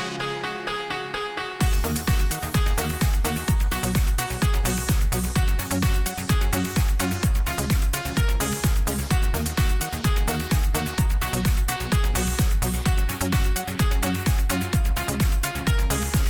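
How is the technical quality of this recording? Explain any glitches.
No glitches or faults are audible.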